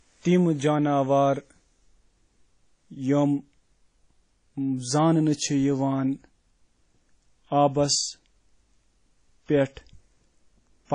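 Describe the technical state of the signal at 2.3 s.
Likely WMA compression, present throughout including 2.3 s: coarse long-block quantisation, fitting a bitrate near 32 kbps, makes the speech ringing and washy, with nothing above 10 kHz.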